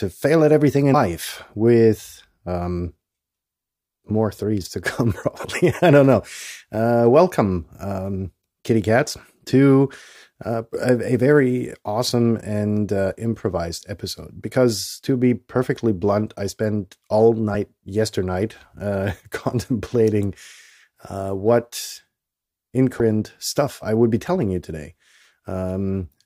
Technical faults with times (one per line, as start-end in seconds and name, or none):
0.93 damaged data in a compressed stream
5.44 damaged data in a compressed stream
17.53 damaged data in a compressed stream
22.99 damaged data in a compressed stream